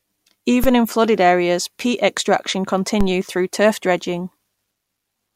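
At 0.64 s there's a DC step: the waveform's zero line suddenly jumps by about -9 dBFS, and you hear it as a dull low thump under the speech. The offset doesn't hold. It drains away slowly, the way a high-pass around 5 Hz would pull it back, so there's no second click. The same thing happens again at 3.01 s, another thump of about the same size, while the speech carries on untouched.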